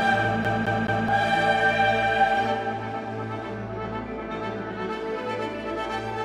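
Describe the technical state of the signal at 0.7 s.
A CD stuck on one turn runs from 0.44 to 1.08 s: the laser jumps back, replaying the same 0.21 s of audio three times with brief mutes between.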